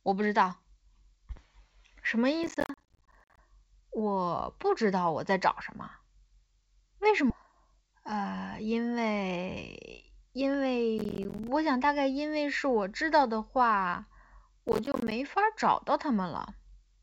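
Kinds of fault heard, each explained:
Processor overload crackle: The processor falls behind and misses a run of audio buffer deadlines, and each missed buffer drops out as a short hard-edged gap of silence. Here it comes in three bursts, from 2.44 to 3.38 s, 10.98 to 11.48 s, and 14.68 to 15.12 s. Each burst is a gritty, tearing crackle over the speech. The gaps are closely spaced, which fits buffers of about 10 ms. The longest burst is nearly a second.
Skip ahead: At 7.3 s playback jumps forward with no gap at all. Roughly a second of speech is missing, and the audio on either side of the cut is joined almost directly. This points to a stretch being discarded while later audio was already queued, likely by a jitter buffer that had grown too full. The delay drops by about the same second at that moment.
Jitter buffer speed-up: Right after the skip, from 7.48 to 8.34 s, the speech runs about 5% fast while its pitch stays the same. 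The receiver is trimming small pieces, one or a few pitch periods long, again and again to shrink a queue that is still too long. Around 50 ms of audio is taken out in total. The speech sounds slightly hurried through that stretch before returning to normal pace.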